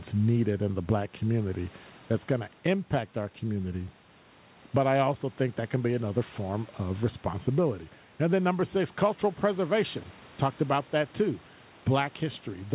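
No technical faults can be heard anywhere in this speech.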